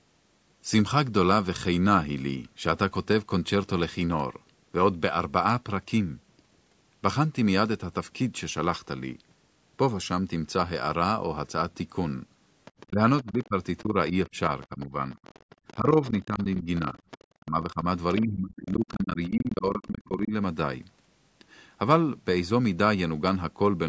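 Speech clip in which the other side's voice is heard leaking through from 12.65 to 16.43 s, and again at 17.11–17.24 s and 18.13–19.28 s. It sits roughly 20 to 25 dB below the talker, likely loudspeaker echo the echo canceller left behind, and shows as a faint second set of harmonics on a spectrogram. The talker's speech is also suppressed in double talk from 12.89 to 15.17 s and 15.77 to 20.33 s, dropping by about 15 dB and then about 20 dB. Across those spans the dips add up to under a second and then about three seconds, visible as gouges in the waveform envelope. The likely cause is the canceller ducking both voices while both sides spoke at once. Throughout, the spectrogram shows nothing above 8 kHz.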